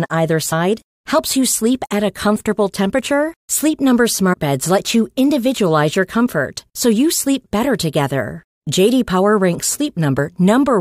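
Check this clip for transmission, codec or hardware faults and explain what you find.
Compressed frames are skipped three times, at 0.51 s, 4.32 to 4.35 s and 10.17 s. At each point the speech jumps forward by around 70 ms, which fits about three lost 23.2 ms frames.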